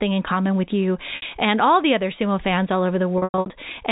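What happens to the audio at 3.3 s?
That's packet loss with pitch repetition, running from 3.18 to 3.50 s. About 240 ms of audio goes missing in bursts over those 320 ms. The receiver fills each gap by repeating the last pitch period and fading it out over roughly 50 ms, so the short drops come across as brief buzzy, held-over tones. The longest gap, about 100 ms, outlasts that fade and sinks to silence before the sound cross-fades back in.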